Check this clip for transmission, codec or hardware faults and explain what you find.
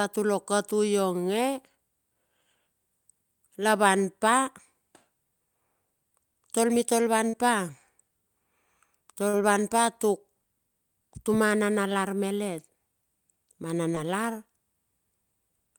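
Three short concealed packet losses occur, at 7.29–7.35 s, 9.29–9.35 s just before "van pa tuk", and 13.95–13.98 s. Gaps of about 40, 40 and 20 ms were bridged by extending the preceding speech, heard as brief smears.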